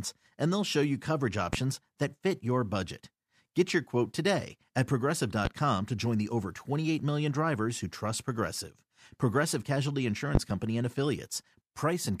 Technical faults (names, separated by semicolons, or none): loud pop